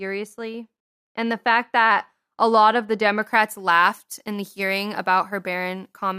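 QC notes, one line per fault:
3.22 to 6.18 s, pre-emphasis left on: after "a lot of the" the speech turns thin, bright and sibilant, because a treble boost matching the FM 75 µs curve was never cut back, leaving 10 kHz about 13 dB hotter than 1 kHz.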